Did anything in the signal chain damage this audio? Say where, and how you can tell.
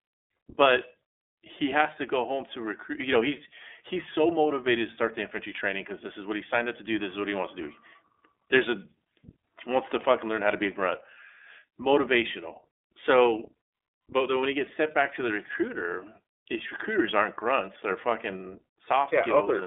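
Yes, the codec stage did it, and it's iLBC coding across the whole clip. The speech sits in a phone-line band of roughly 250 Hz to 3.5 kHz with nothing at all above 3.7 kHz, so it sounds boxed-in. The roughness is plainly audible: each frame's excitation is coded on its own, which gives a slightly synthetic, grainy edge. That fits iLBC's 30 ms frame mode at around 13.33 kbps.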